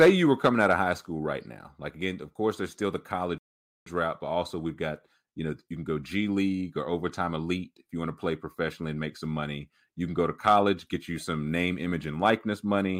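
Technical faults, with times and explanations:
0.00–0.09 s, 0.45–0.75 s, 10.47–10.55 s and 12.26–12.30 s, hard clipping: the speech peaks are driven roughly 2 to 5 dB past what the signal path can carry, so their tops are sliced flat. This adds high harmonics, heard as brief crackly harshness on those loud moments, strongest at the start.
3.38–3.86 s, playback stall: the speech cuts to silence for about 480 ms and then resumes. This is likely because the player's buffer ran dry or its thread was held up, leaving nothing to output until data arrived again.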